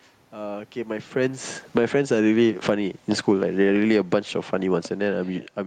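Automatic gain falling from 1.17 to 1.97 s: shortly after the talker shifts position, around 1 s, the gain control hears the input as too loud and pulls the gain down by about 15 dB. The speech and the room noise sink together. Automatic gain rising from 1.87 to 3.12 s: the control judges the level too quiet and lifts the gain by about 11 dB, so speech and background swell over more than a second. Automatic gain falling again from 2.52 s to the end: the gain starts sliding down while it is still rising, and it keeps pulling the whole signal lower through the talker's second move near 5.5 s.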